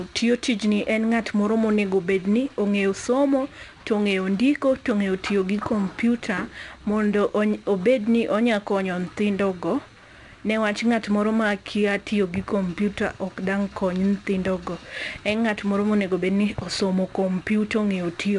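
From the start to the end of the speech, 4-bit ADPCM compression is plainly audible. Each sample is coded as a coarse 4-bit step from a predicted value, and the quantisation error rides along with the signal level, so every louder syllable carries a gritty, level-following hiss. Nothing is present above 10.7 kHz, which points to a reduced sample rate near 22 kHz and a stream of roughly 89 kbps, and the top end sounds dulled as a result.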